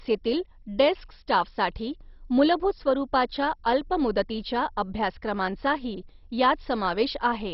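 From start to finish the speech sounds dull and gurgling, with nothing above 5.6 kHz and a coarse, granular roughness. This is likely MP2 compression at a starved rate, which fits about 32 kbps: the encoder switches off the upper sub-bands entirely, lets bands flicker on and off, and quantises the surviving ones harshly. Unlike a plain low-pass filter, the remaining bands churn and bubble, and the damage sounds more granular than the swirly, metallic warble typical of MP3.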